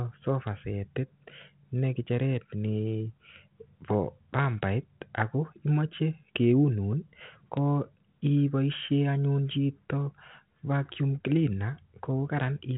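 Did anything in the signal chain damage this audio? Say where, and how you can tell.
No, nothing here sounds damaged; this is speech carried over 32 kbit/s G.726 ADPCM, so the band stops at about 3.9 kHz, which is just how that telephone-grade path sounds.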